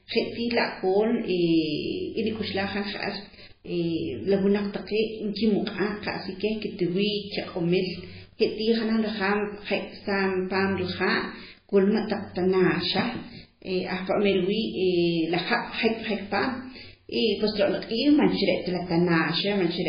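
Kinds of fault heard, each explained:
MP3 compression: Nothing sounds above 5 kHz. S sounds are swirly and metallic, and the speech is heavily watery. The likely cause is MP3 near 16 kbps.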